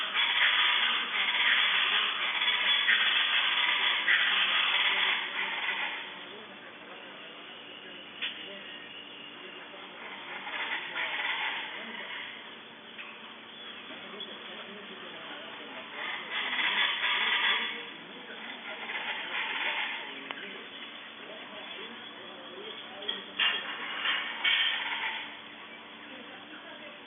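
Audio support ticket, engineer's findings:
No faults found on listening; nothing in the audio points to a failing component or any issue to escalate.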